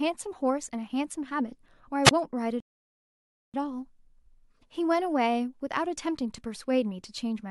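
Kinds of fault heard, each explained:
Wireless microphone squelch dropout, 2.05 to 2.11 s: the analogue FM radio link fades, and the receiver's squelch gate briefly shuts the output, leaving a rise of hiss, a mute of about 20 ms, and the voice coming back afterwards.
Rebuffering stall, 2.60 to 3.54 s: playback runs dry of downloaded audio and halts, so the speech drops into silence for about 0.94 s, then picks up at exactly the point it left off, adding time without losing any.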